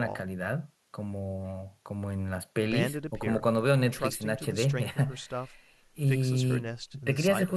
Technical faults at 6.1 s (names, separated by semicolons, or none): channel delay (comb filtering)